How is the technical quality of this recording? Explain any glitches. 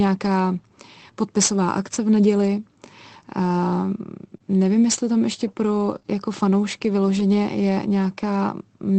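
The recording is a speech call carried over Opus, with audio reaching up to about 8 kHz. It has a few brief dropout-related glitches, clustered between 4 and 7.2 s.

Short concealed packet loss: At 4.37 to 4.42 s, and again from about 6.00 to 6.06 s, where two losses fall back to back, the sound briefly smears or wobbles. Each loss, 20 ms of audio arrived too late. The decoder extended the preceding sound to fill the hole, then blended back.

Lost packet rebuilt from error correction: Around 5.96 to 6.07 s, overlapping the second concealment, and at 7.19 s, the sound turns momentarily rougher and noisier with no gap. Each time, one lost packet's 20 ms was replayed from a low-bitrate copy carried in the next packet.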